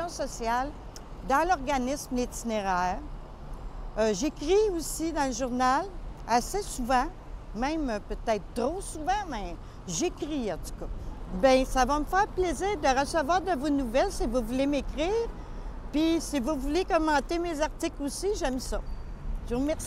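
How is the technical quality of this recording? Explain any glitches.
No glitches turn up anywhere in the recording. There is nothing to explain, since no dropout, click or other disturbance appears at any point.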